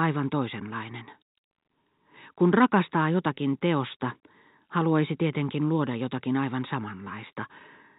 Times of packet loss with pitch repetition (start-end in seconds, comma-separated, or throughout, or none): 3.35